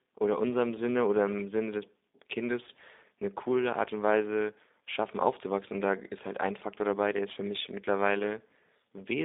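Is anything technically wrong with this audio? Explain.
Yes. Throughout the speech the sound is thin and boxy, confined to a narrow band from about 250 Hz to 3.7 kHz, with a rough, slightly synthetic buzz that is plainly audible. This is G.729 codec damage, which fits an 8 kbit/s G.729A stream. The codec discards the waveform and resynthesises each 10 ms frame from a vocal tract filter, a pitch predictor and a few sparse pulses, so natural texture becomes grainy and artificial.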